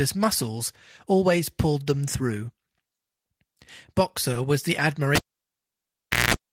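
At 4.33 to 4.37 s, just before "was the", there is a short concealed packet loss. About 20 ms of the call's audio arrived too late for the decoder. The receiver covered the gap by extending the preceding sound for roughly 20 ms and then cross-fading back into real speech. It comes across as a brief smear or wobble rather than a clean click or hard dropout. That continuation of the previous sound distinguishes concealment from a plain gap, which would leave silence.

From 5.15 to 6.34 s, right after "was the", a cable is pulled and plugged in. A pop marks the disconnect, and the signal then drops to near silence for about 1.1 s. About 0.2 s of 60 Hz mains buzz appears while only the tip is making contact. A second pop follows, and the sound returns. The pops at each end and the hum burst between them distinguish this from a network dropout or a muted channel, which would fall silent cleanly.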